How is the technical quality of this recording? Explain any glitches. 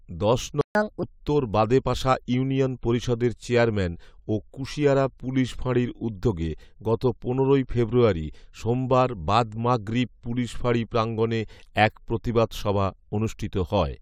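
The recording has two linked playback glitches near the start.

Playback stall, 0.61 to 0.75 s: the speech cuts to silence for about 139 ms, likely because the player ran short of data, then resumes.

Catch-up at higher speed, 0.75 to 1.03 s: the player runs its backlog at 1.5 times speed, so the speech briefly sounds hurried and about seven semitones higher.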